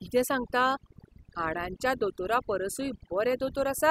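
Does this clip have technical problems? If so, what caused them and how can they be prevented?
Yes. Overdone noise removal runs throughout this speech: the suppressor cuts individual frequency bands whenever they sit near its noise estimate, so pauses collapse to near silence with twinkling specks, and softer speech detail vanishes. A spectrogram shows scattered isolated dots and ragged, hollowed harmonics. Using a gentler reduction setting, checked by ear, prevents it.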